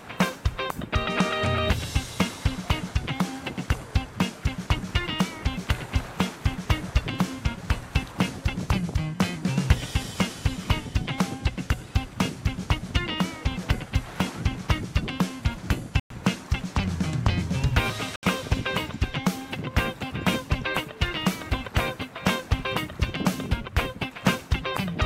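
Bluetooth stall at 16.00 to 16.11 s and again at 18.16 to 18.23 s: the sound drops to dead silence for about 107 ms, then about 71 ms, before carrying on. The likely cause is radio interference holding back packets on the wireless link, so the receiving headphones' buffer emptied and playback halted until the retransmitted audio arrived. Each gap is a clean cutout rather than a fade, with the sound resuming abruptly afterwards.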